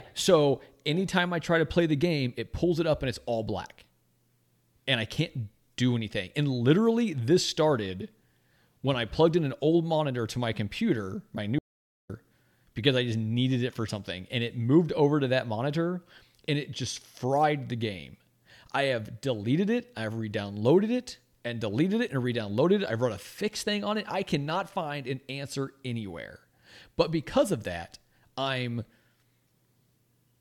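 At 11.59 s, right after "to my computer my", the speech cuts out into an audio dropout to silence until 12.10 s, roughly half a second of dead silence with no room tone. The input was likely lost briefly while recording continued, so that speech is gone.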